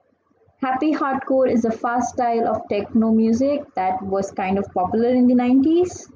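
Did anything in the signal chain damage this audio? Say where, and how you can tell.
No, nothing along the chain seems to have harmed this speech recording, so there's no stage to point to and nothing to chase.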